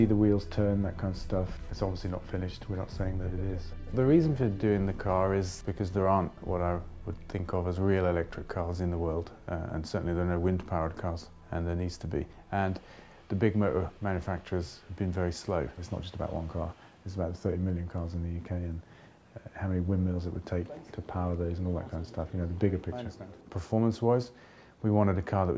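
No technical faults can be heard anywhere in this clip. There is nothing in the audio that calls for a timestamp or a closer look.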